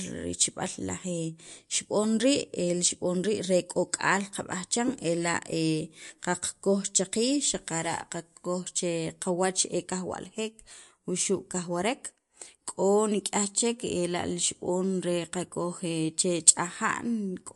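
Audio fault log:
Throughout: MP3 compression. The speech has nothing above 11.3 kHz, so the top octave is simply gone and sibilants sound dull. The damage is plainly audible. Weak frequency components drop in and out between frames, giving a watery, swirling texture, and consonant onsets smear. This is likely a low-bitrate MP3 encode, which fits a rate of roughly 53 kbps. With so few bits, the encoder trims the treble and discards detail it judges masked.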